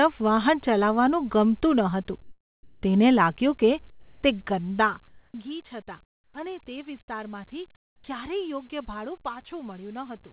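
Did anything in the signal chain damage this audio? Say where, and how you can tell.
Yes. Comfort noise in place of the background fills the pauses at 2.22–2.82, 3.90–4.22, 5.08–5.34, 6.04–6.34 and 7.76–8.04 s, likely from discontinuous transmission in call processing. The detailed room tone becomes steady, featureless hiss about 3 to 18 dB quieter. A spectrogram shows uniform, textureless bands in those gaps, and the waveform drops to a flat floor.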